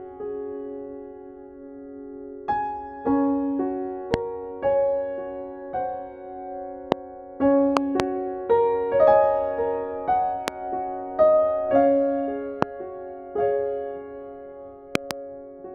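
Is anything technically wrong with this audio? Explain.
Yes. There are loud pops.

Single pops occur at 4.14–4.16, 6.92–6.94, 10.48–10.50 and 12.62–12.65 s. Double pops occur at 7.77–8.02 and 14.95–15.13 s. Each peaks roughly 20 to 25 dB above the sound. They are likely voltage spikes from a switch, plug, static or driver glitch. The spike jumps into the signal and the following circuits shape it. It is heard as a sharp crack or thump, and the sound continues underneath.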